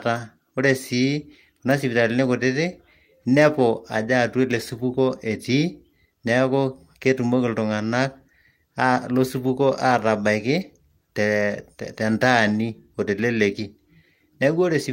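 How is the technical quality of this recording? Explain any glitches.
No glitches or transmission faults can be heard anywhere in this speech recording.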